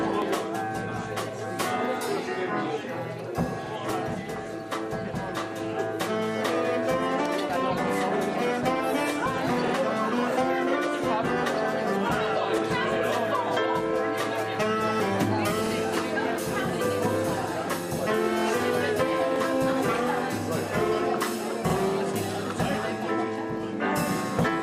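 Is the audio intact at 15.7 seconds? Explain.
No. From 15.67 to 15.72 s there is an overlapping chunks fault. The audio appears to have been handled in blocks of about 6 s, and the block starting here begins before the previous one has finished, so a 50 ms stretch of sound is played a second time at the join. The result is a brief stutter, with a click where the repeated segment butts against the material around it.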